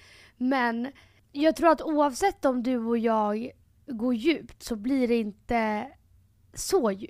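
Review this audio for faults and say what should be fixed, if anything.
Nothing here needs fixing: the speech signal holds steady throughout, with no technical faults to be heard at any point.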